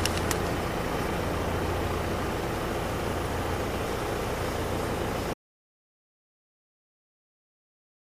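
An audio dropout to silence begins at 5.34 s and runs to the end of the clip, 2.7 s in all. The sound cuts off abruptly mid-flow and is replaced by complete silence, with no room tone or background left underneath. The input was likely lost, whether through a disconnected device, a failed link or a stray mute, while recording carried on writing silence, so whatever followed in that stretch is gone.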